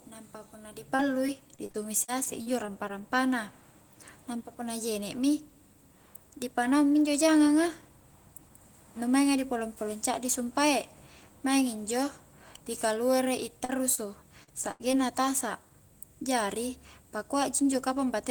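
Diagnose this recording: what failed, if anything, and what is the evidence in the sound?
Network stage: repeated packet loss (robotic sound) from 0.95 to 2.91 s. Ten gaps of up to 40 ms, patched by continuing prior speech, make it choppy with pieces missing.

Network: short concealed packet loss at 13.65–13.71, 13.95–13.99, 14.43–14.49 and 14.92–14.95 s. Each hole is bridged by extrapolated speech, heard as brief smears or wobbles.

Network: a burst of packet loss at 14.71–14.82 s drops about 80 ms. Concealment stretches the last sound, fading it, then speech resumes with that stretch missing.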